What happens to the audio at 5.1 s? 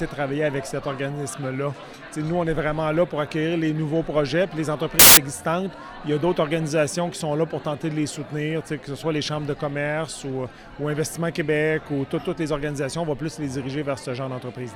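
Around 5.1 s there's a short burst of samples built from the wrong bytes, running from about 4.99 to 5.17 s. The reader misassembles each sample's bytes, so the jittery low-order bits land in the high-order position, and you get a blast of loud, harsh broadband noise.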